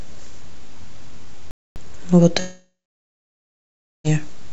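At 1.51 s the speech cuts out cleanly and stays silent until 1.76 s, about 0.25 s. This is a playback stall, likely from the player running short of data or its thread being blocked. Unlike a network loss, nothing fills the gap, and then the speech picks up again.

From 2.40 s to 4.07 s comes a long network dropout, likely caused by packets not arriving. The last sound is stretched into a fading buzz for a few tenths of a second, followed by about 1.3 s of near silence. When the speech returns, roughly 1.65 s of it is simply gone. The concealment tail and the skipped content set it apart from the stall. Through the G.722 call path, nothing is heard above 8 kHz.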